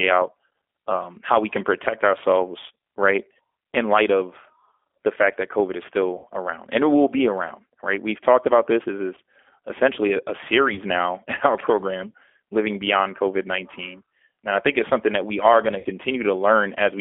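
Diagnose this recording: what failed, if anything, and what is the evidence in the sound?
Codec stage: G.729 coding, plainly audible throughout. Speech is confined to about 300 Hz to 3.5 kHz and rebuilt from filter, pitch and pulse parameters, consistent with 8 kbit/s.

Network stage: VoIP packet loss concealed by the speech codec at 6.18–6.27 s, 9.15–9.18 s, 10.74–10.79 s and 15.79–15.87 s. The decoder extrapolates its last pitch and filter with fading gain across gaps of 60, 20, 20 and 60 ms.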